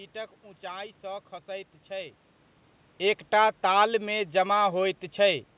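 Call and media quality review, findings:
No faults found in the speech audio.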